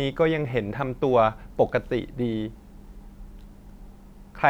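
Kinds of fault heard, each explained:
No technical faults are audible in this speech recording.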